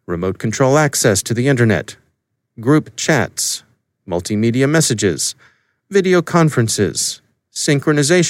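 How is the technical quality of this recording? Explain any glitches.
Nothing stood out as a technical problem on listening, so there are no glitches in the recording to explain.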